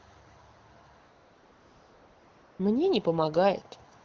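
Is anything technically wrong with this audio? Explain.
Yes. There's AMR comfort noise from 0.99 to 2.59 s and again from 3.97 s to the end. The phone decided nothing was being said and stopped sending speech frames, so the receiver swapped the real background for smooth synthetic hiss that switches on and off.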